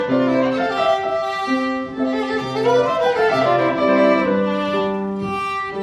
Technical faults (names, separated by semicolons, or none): none